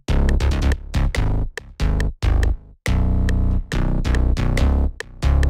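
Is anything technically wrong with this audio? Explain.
No, nothing technically wrong stood out on listening to this audio.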